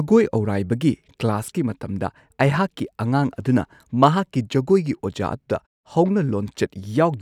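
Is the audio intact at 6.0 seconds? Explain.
Yes, the audio is intact at 6.0 s, with no fault at that moment.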